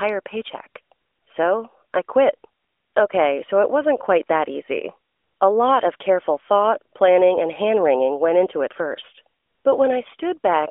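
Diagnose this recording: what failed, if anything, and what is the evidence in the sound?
Nothing in this recording failed. What can be heard is the AMR narrowband mobile codec doing its normal job: the band stops near 300 Hz and 3.5 kHz, and the light coding texture fits its higher 12.2 kbps mode.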